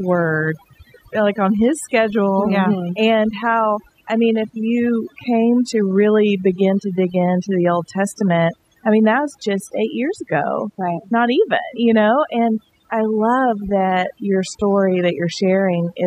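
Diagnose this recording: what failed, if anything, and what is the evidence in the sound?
Overdone noise removal is present throughout this speech recording, introduced at the processing stage where a noise suppressor was set far too aggressively. Between phrases the background drops and breaks up into twinkling, isolated specks. The suppressor treats every frequency band that sits close to its noise estimate as noise and pushes it down or off, so quieter parts of the voice vanish along with the noise.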